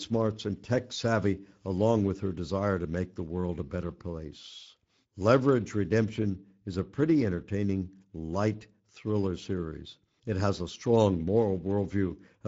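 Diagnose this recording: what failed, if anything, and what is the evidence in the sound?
The failure is at the codec stage: Speex codec damage, plainly audible from start to finish. The speech has a grainy, buzzy roughness that never lets up. Speex is a CELP coder. It models the voice as a vocal-tract filter driven by an excitation signal. With few bits for that excitation, the detail is approximated and the result sounds coarse. The steady level of damage fits a fixed setting near 16.8 kbps.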